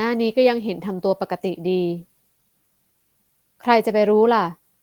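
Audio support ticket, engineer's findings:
Findings: no audible fault found in the speech recording; no symptom, component or mechanism to report.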